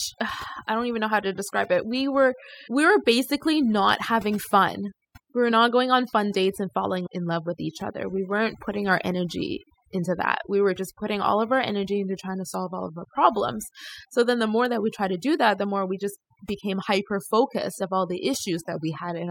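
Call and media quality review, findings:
Overdone noise removal, throughout the speech. Background drops, breaking up into twinkling specks. Noise suppressor set too aggressive: bands near its noise estimate are driven down or off, taking quiet speech components with them.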